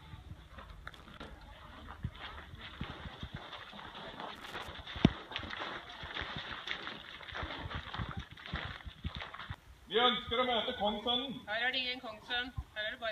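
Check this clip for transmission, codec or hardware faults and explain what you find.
One hardware fault turns up twice: loose connector crackle, from about 0.93 to 1.36 s and again from 4.36 to 4.68 s. A worn or dirty contact in the signal path is making and breaking as it shifts, so the audio is chopped on and off many times within each burst, and any DC offset on the line turns every interruption into a pop. The result is an irregular scratchy crackle lasting a few tenths of a second. On a waveform, each burst shows jagged dropouts and sharp spikes. On a spectrogram, it shows dense, broadband vertical streaks.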